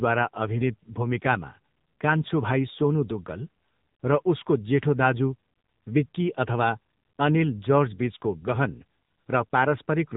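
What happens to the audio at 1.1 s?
At 1.1 s the speech carries the AMR narrowband mobile codec, which runs through the whole clip rather than starting there. The codec rebuilds the voice from a vocal-tract model excited by a few pulses per short subframe, and the plainly audible buzzy, synthetic edge points to a low mode near 8 kbps. Nothing above 3.8 kHz survives, so on a spectrogram the energy stops at a flat ceiling, while the waveform looks smoothed and coarsely re-synthesised.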